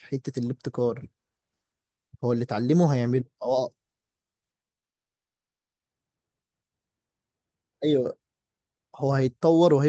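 At 4.89 s the incoming packets stall, most likely held up in transit, and the jitter buffer runs dry, producing a call audio freeze that lasts until 5.81 s. The receiver has nothing to play, so the speech stops dead for about 0.9 s of silence. When the packets resume, the speech picks up where it left off with nothing lost, but everything after the gap now arrives 0.9 s later than before.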